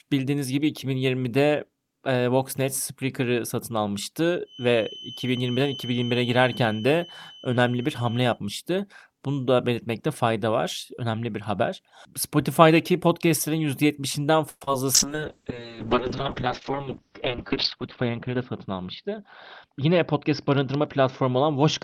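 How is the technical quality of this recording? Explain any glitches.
The recording has several clear call-path faults, concentrated in its second half, plus a whistle early on.

Feedback whistle, 4.43 to 8.40 s: a steady tone at 3 kHz, around 15 dB below the speech, sits behind the sound and swells and fades slowly in level. The likely cause is a loudspeaker-to-microphone loop held just at the edge of feedback, so one frequency rings without building up.

Call audio freeze, 14.49 to 14.62 s: the speech stalls, and the last sound is stretched into a fading buzz for 117 ms, including about 40 ms of silence. This most likely reflects delayed packets draining the jitter buffer. When they arrive, speech resumes where it stopped, so nothing is lost but the delay grows by 117 ms.

Short concealed packet loss, 14.64 to 14.68 s and 14.73 s: about 30 ms and then 10 ms of audio never reached the decoder in time. 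The receiver filled the gaps by extending the preceding sound and blending back, heard as a brief smear.

Call bitrate drop, 14.95 s to the end: the encoder's rate falls from 40 to 8 kbps, holding at its lowest for about 2.1 s, and the audio bandwidth narrows from 20 kHz to 6 kHz. Coarser coding makes the speech rough and watery, and the missing highs make it muffled.

Jitter buffer speed-up, 16.70 to 18.68 s: the receiver trimmed short pitch-period slices repeatedly, removing about a tenth of a second to shrink excess buffered delay. Speech runs at 105% speed with unchanged pitch, sounding slightly hurried.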